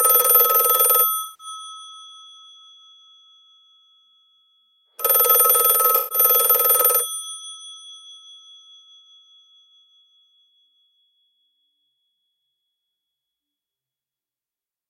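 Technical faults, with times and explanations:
1.22–1.47 s and 5.96–6.18 s, AAC frame loss with concealment: two short dropouts of about 170 ms and 150 ms, which fits losing roughly eight and seven frames. The decoder patched each gap from the last good spectrum, so the sound turns smeared and noisy rather than silent. On a spectrogram each patch is a blurred, noise-textured block with transient detail wiped out. In the waveform the envelope goes flat and fizzy until normal decoding resumes.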